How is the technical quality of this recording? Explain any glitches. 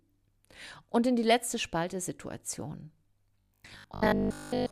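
The recording has one clear glitch near the end. From 3.40 to 4.70 s the speech turns into a rigid, metallic buzz pitched at 50 Hz: robotic sound from repeated short buffers. The likely cause is audio arriving too late, so a 20 ms chunk was looped in place of most of the real signal.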